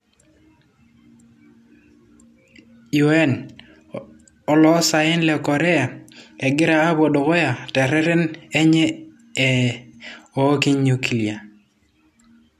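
No technical faults are audible.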